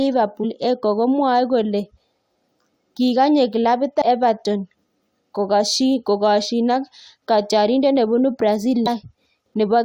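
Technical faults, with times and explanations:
0.43 to 0.45 s, 4.01 s (just after "kikanye klabit") and 8.86 s (just after "kokasyin ak katyarindet nebunu"): damaged data in a compressed stream. Each is a brief chirp or blip lasting 20 ms or less that cuts into the speech. A stretch of the compressed data arrives corrupted, so the decoder misreads those frames, loses its sync and skips forward to the next valid frame header, leaving a short burst of garbled output.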